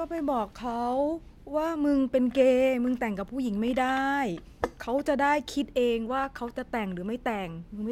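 Nothing goes wrong anywhere in this speech recording, so there's no technical fault to point to at any moment.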